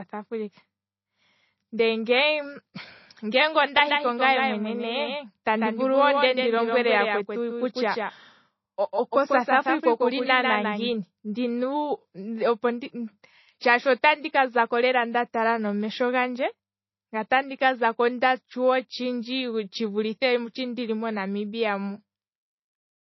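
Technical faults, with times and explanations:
Throughout, low-bitrate audio saved at a high bitrate: the speech has nothing above 5.8 kHz and keeps a smeared, swirly coding texture, likely from a low-rate MP3 re-encoded at a much higher rate. A spectrogram shows a flat ceiling at 5.8 kHz with empty space above.
3.77 to 10.93 s, doubled audio track: a second full-band copy of the speech trails by roughly 150 ms at about 5 dB lower, with no decay or room colour, likely from the same audio mixed in twice. On the waveform each syllable has a smaller twin just after it, and both edges are abrupt.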